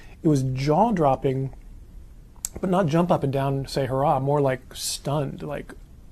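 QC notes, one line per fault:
No technical faults are detected anywhere in the signal.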